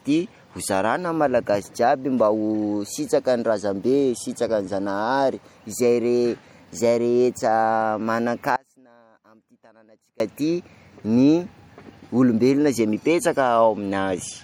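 A speech recording with plainly audible MP3 compression throughout: the sound has a watery, swirling quality and smeared consonant attacks as weak frequency lines drop in and out between frames, which fits a low bitrate around 64 kbps, with nothing above 21 kHz. From 8.56 to 10.20 s there is an audio dropout to a faint residue: the signal cuts abruptly for 1.64 s, leaving only faint sound roughly 30 dB down, likely a lost feed while the downstream path stayed live.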